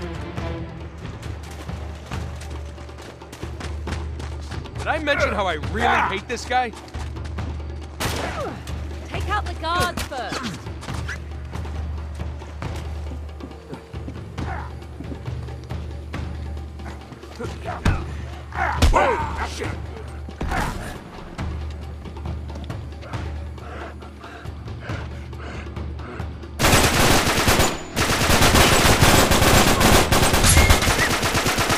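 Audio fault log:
Nothing to log here; listening all the way along, no fault turns up anywhere in this one.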